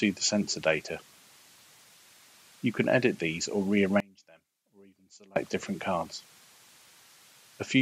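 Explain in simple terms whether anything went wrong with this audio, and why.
From 4.0 to 5.36 seconds the sound suddenly drops to a faint trace, almost vanishing, then returns. The likely cause is one channel inverted: one stereo side was flipped upside down, so when both sides are combined, what they share cancels out.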